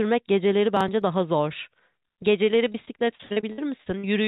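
Processor overload crackle runs from 0.77 to 1.02 s. The processor could not finish its audio buffers on time, and several deadlines were missed in a row. Nothing was held in the missed buffers; each one was simply skipped, leaving hard-edged holes. The pattern suggests about five missed blocks of roughly 10 ms each. Together they come across as a quarter-second of gritty crackle tearing through the speech before it settles again.

Repeated packet loss, heard as robotic sound, spans 2.72 to 4.04 s. Packets went missing or arrived late again and again, which points to around fifteen separate gaps. Each was patched by stretching the preceding sound, so about 360 ms of the stretch, roughly a quarter of it, is concealment rather than real audio. The longest hole is 52 ms. The speech turns choppy, with pieces dropping out. Throughout the clip the call path's narrowband coding, consistent with G.711 mu-law at 64 kbps, leaves nothing above 4 kHz.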